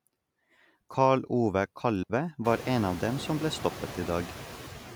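From the start of the speech, noise suppressor artifacts are present. The suppressor treats steady noise as something to remove and pulls down the bands that carry it, frame by frame. The cut here is about 7 dB, so the background dips in the pauses and comes back up under the speech.

From 2.03 to 2.10 s there is a digital wireless dropout. The radio link lost too much data for the receiver to rebuild the stream, so the receiver muted the output for about 65 ms with a very quick fade in and out. It is heard as a short, clean gap of near silence. No crackle or noise burst comes before or after it, which distinguishes a receiver mute from an analogue RF drop.

At roughly 2.5 s the room noise rises by about 24 dB and settles about 15 dB below the speech.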